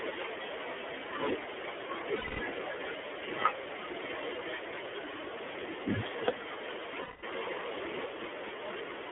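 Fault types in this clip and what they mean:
iLBC codec: Narrowband coding limits the speech to roughly 300 Hz to 3.5 kHz, with plainly audible rough, slightly synthetic texture, consistent with 30 ms frames.
Lost iLBC frames: Packets dropped out around 2.16 s and 7.01 s. The decoder holds a buzzy vowel-like sound for about 240 ms and 210 ms, then speech recovers.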